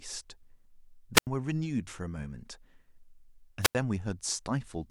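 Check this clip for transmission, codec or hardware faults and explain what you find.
Two wireless microphone squelch dropouts affect the speech, at 1.14–1.27 s and 3.61–3.75 s. In each, the radio signal fades, hiss rises, and the receiver's squelch mutes the output for about 86–88 ms. The hiss before each gap sets these apart from a clean digital packet-loss gap.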